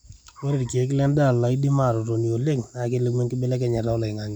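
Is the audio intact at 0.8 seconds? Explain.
Yes, the audio is intact at 0.8 s, with no dropout, click, distortion or other fault at that moment.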